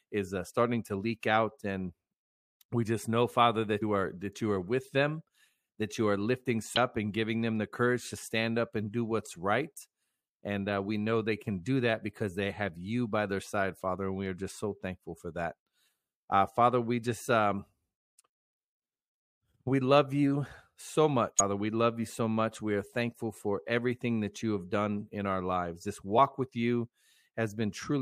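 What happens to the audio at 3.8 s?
At 3.81 s the speech is hit by damaged data in the compressed stream: corrupted bytes make the decoder misread the frame there, lose sync and hunt for the next valid frame header. The result is a brief chirp or blip lasting about 16 milliseconds, until 3.826 s.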